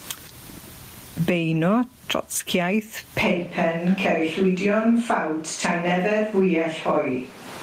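From the start, the speech shows gain pumping, a swing of around 20 dB. Unlike a slow automatic gain drift, it tracks each loud sound, which points to gain set far too high with a fast limiter likely clamping it.

At 3.25 s the sound turns roomy and hollow with thinner bass and stays that way to the end, the sound of a switch to a distant microphone, likely a camera microphone replacing the close one. The level barely changes and faint room noise sits well below the speech. The sudden, lasting change in tone sets it apart from added reverb.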